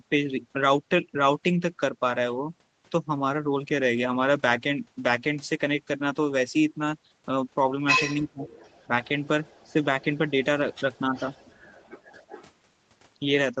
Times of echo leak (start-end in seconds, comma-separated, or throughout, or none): 8.45-9.08, 9.43-9.69, 11.15-12.47